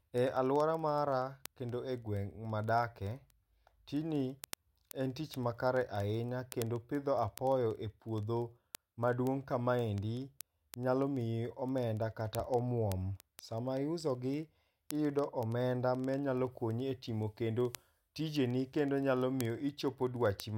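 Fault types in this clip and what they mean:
Word clock ticks: A sharp ticking runs under the speech from 0.13 s to 20.54 s, repeating about twenty times a second, some ticks harsher than others. Each tick fits a single sample being dropped or doubled where a digital link is read by a device on its own clock, not locked to the sender's. A clock mismatch of a few hundred parts per million would make the two slip past each other that often.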